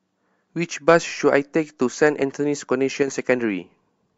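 At 3.03 s the level drops suddenly by about 6 dB. It stays down for 50 ms, until 3.08 s, then returns just as abruptly. This sounds like one channel drops out. The likely cause is that one side of a stereo feed went silent for that instant. When the two sides are summed to mono, the part common to both falls by half. Anything carried only on the lost side vanishes. The result is a brief dip.

At 3.45 s the speech jumps forward. This is compressed frames skipped: the decoder received no usable data for part of the stream and carried on from the next good frame. Roughly 20 ms of audio goes missing, which points to several short frames being lost together.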